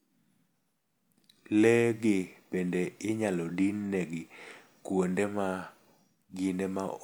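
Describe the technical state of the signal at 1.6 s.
At 1.6 s the speech signal is intact, with no dropout, distortion or other fault to be heard at that moment.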